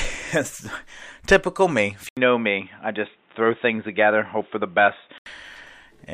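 At 2.09 s the recording most likely switched its input to a poorer device, such as another microphone or a headset's call profile, and it stays there until 5.26 s. An 80 ms silence marks the changeover, then the speech turns dull and boxy, with nothing above 3.8 kHz. A faint new background noise sits well below the speech, at roughly 40 dB down, while the loudness stays about the same. The full bandwidth returns at 5.26 s.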